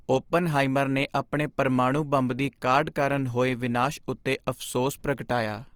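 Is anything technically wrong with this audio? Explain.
Yes. Throughout the speech, the sound is grainy and rough, with a noisy texture replacing clean tonal detail, though the top end still reaches about 20.2 kHz. This likely comes from Opus compression in its CELT music mode at a low rate fitting about 24 kbps, where starved bands are filled with noise or folded copies of lower bands.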